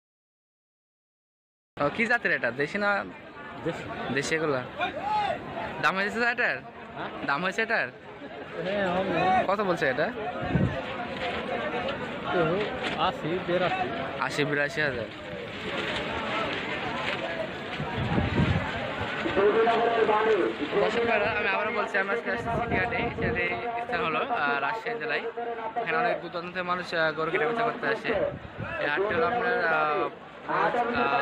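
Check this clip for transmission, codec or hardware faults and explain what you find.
One fault is present: a cut-off start. From 0 to 1.77 s the clip holds digital silence, then the audio enters abruptly in the middle of a sound with no attack or fade-in. Capture or streaming began late, so the onset was never recorded.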